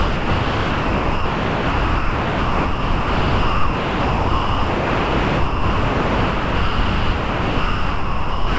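From 0 to 8.58 s the sound never comes through. Steady comfort noise fills the span instead, likely sound dropped by the voice detector, which took it for background. The waveform is a flat, even band, and the spectrogram shows a featureless wash.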